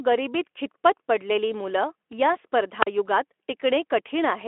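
A wireless microphone squelch dropout hits this speech clip from 2.81 to 2.87 s. The radio signal fades, hiss swells briefly, then the receiver mutes for about 41 ms before the voice returns. On a waveform it shows as a short flat gap; a spectrogram shows a thin vertical blank, preceded by a rise of broadband hiss. The surrounding speech stops near 3.8 kHz, a telephone-style band with light Speex coding, which fits a bitrate around 15 kbps.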